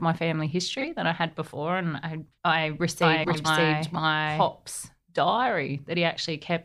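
In this speech clip, a short garbled flutter at 0.78 to 0.84 s comes from frames out of order: two adjacent blocks of about 26 ms each were swapped and decoded in that order, so the halves of that stretch play exchanged while no time is lost. The same fault returns at 3.24 to 3.45 s on a larger scale, with two runs of about 105 ms traded places, which fits groups of several frames moving together. From 3.02 to 4.48 s a doubled audio track is audible: a full-band copy of the speech runs behind the original at roughly the same level and roughly half a second later. It has none of the decay or room colouring of an echo, and it starts and stops abruptly. The likely cause is the same audio being mixed in twice, either through a second, slower capture path or an edit that holds two copies out of step.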